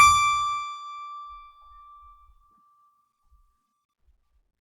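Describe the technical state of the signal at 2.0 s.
At 2.0 s the music plays through intact, with no dropout, distortion, glitch or other fault at that point.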